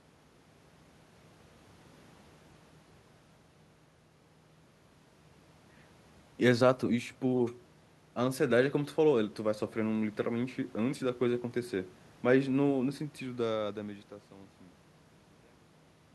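Nothing in this speech recording stood out as a technical problem on listening, and the level simply eases down in a smooth fade-out over roughly the last three seconds, ending at about 16.1 s.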